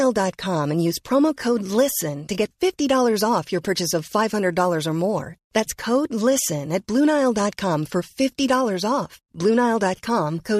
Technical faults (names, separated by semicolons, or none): none